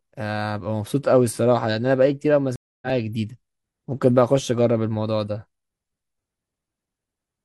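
A speech clip with a stream reconnect: at 2.56 s the connection drops, playback stops, and a new decoder is started partway into the stream. The result is a gap of silence lasting 262 ms, ending around 2.87 s, after which the speech picks up at a point roughly a fifth of a second further on than where it broke off, so a short stretch of speech is simply skipped over rather than delayed.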